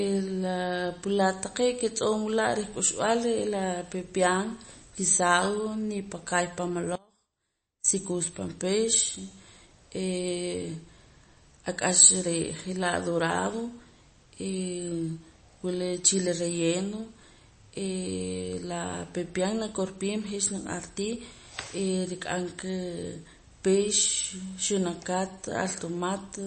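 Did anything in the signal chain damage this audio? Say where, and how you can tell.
Yes. The codec stage likely did this. Nothing sounds above 8.3 kHz, with plainly audible MP3 compression swirl throughout. That fits a low bitrate near 32 kbps.

An audio dropout to a faint residue runs from 6.96 to 7.84 s, after "nipakaay pan" and before "sikuux pan pix". Faint sound sits about 30 dB down, likely from a brief loss of the signal while the path after the break stayed live.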